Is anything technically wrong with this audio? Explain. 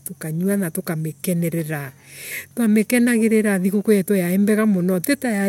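No, nothing technically wrong turns up anywhere in this speech recording.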